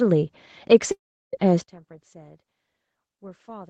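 At 0.91 s the speech breaks off. The last sound smears into a fading buzz, then silence settles in until 1.35 s. About 0.4 s of speech never returns. This is a long network dropout, likely from packets that never arrived.

From 1.62 s to the end, the speech sinks by about 26 dB and turns faint. This is one channel inverted, likely a polarity flip on one side. In mono, the shared centre content cancels, leaving only the difference between channels.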